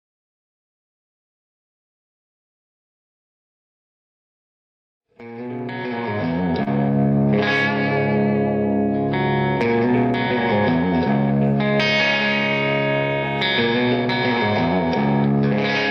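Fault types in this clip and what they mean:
Short stall from a late packet: the jitter buffer ran empty and sound was held 29 ms at 6.63 and 7.08 s; nothing is lost, unlike a dropout.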